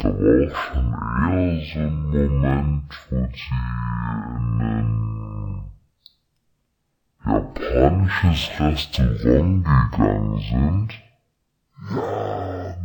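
From start to end the speech has a stereo read as mono fault: left and right samples are taken in turn as one channel, so everything runs at half speed and an octave low. Unlike a plain sample-rate mismatch, a faint mirrored copy also appears in the upper spectrum.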